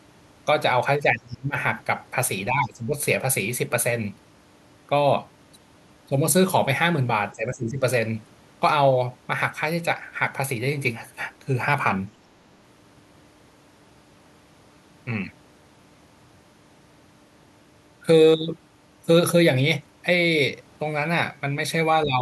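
An echo canceller likely turned the outgoing speech down during double talk, mistaking it for echo: speech suppressed in double talk at 1.03–1.56, 2.49–2.94, 7.32–7.83 and 22.04 s to the end. Each time the speech dips, by as much as 25 dB at first and about 10 to 15 dB later.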